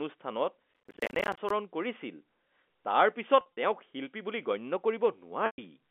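From 0.74 to 1.50 s, a processor overload crackle breaks into the speech. The processor could not finish its small audio buffers on time and missed deadline after deadline, and each miss was filled with silence. The gaps are short, which fits buffers of around 10 ms, and there are dozens of them in this stretch. Their hard edges merge into a gritty, tearing crackle over the telephone-band speech (G.711, roughly 250 Hz to 3.5 kHz). The crackle stops once the load passes.

Between 3.41 and 3.57 s, packet loss with pitch repetition sets in. About 100 ms of audio went missing, scattered across those 160 ms, and the longest single gap was 50 ms. Each hole was bridged by repeating the last pitch period and fading it, so the speech takes on a briefly held, buzzy quality. At 5.46 to 5.58 s, a second loss of about 120 ms is patched the same way, but the repeated pitch fades into silence before the speech returns with a short cross-fade.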